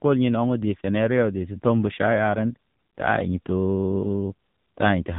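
Speech with the AMR narrowband mobile codec applied throughout: nothing passes above 3.8 kHz, and heavy buzzy, synthetic vocal-tract modelling, unlike a clean low-pass, suggests a low rate near 6.7 kbps.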